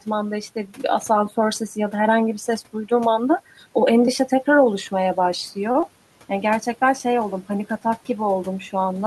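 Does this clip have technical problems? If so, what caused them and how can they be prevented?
Yes. Between 5.71 and 5.90 s there is a short stall from a late packet. A packet arrived after it was due, the jitter buffer ran empty, and the receiver held the last sound for about 32 ms until the packet turned up, then carried on from the same point. That adds about 10 ms to the audio. You hear it as a sound dragged slightly too long, with a faint buzz or dip, but nothing is skipped. That is what tells it apart from a loss. A slightly deeper jitter buffer, or one that adapts faster to changing delay, would absorb the late arrival.

Inside that stretch, from 5.81 to 5.84 s, there is also a short concealed packet loss. About 20 ms of audio never reached the decoder in time, and the receiver filled about 18 ms of it by extending the preceding sound before blending back in. Unlike the stall, this audio is actually gone rather than waited for, so the result is a quick smear or wobble where a brief sound can disappear instead of merely stretching. 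Forward error correction or redundant packets, together with a steadier network path, would reduce such losses.

The room noise, sitting about 26 dB below the speech, belongs to the recording environment and is not a system fault.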